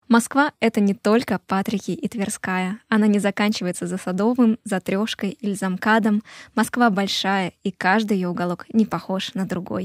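No technical faults can be heard anywhere in the speech recording.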